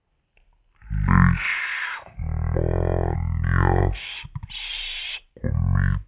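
Throughout, the samples are read out at half the rate they were captured at, with no conversion: a wrong sample rate, consistent with 16 kHz audio played at 8 kHz. The speech runs at half speed and drops 12 semitones, sounding low, slow and dragging.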